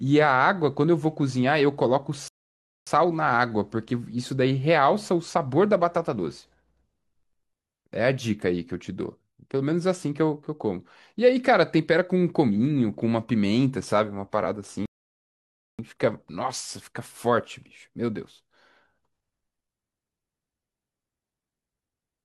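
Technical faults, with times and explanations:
2.28 to 2.87 s and 14.86 to 15.79 s, rebuffering stall: the speech halts into silence for about 0.58 s and then 0.93 s, and each time picks up exactly where it broke off, because playback paused while waiting for more downloaded audio. Unlike a dropout or packet loss, where a chunk of sound vanishes and the timeline runs on, nothing is skipped here. The speech simply arrives later, stretching the clip by the length of each gap.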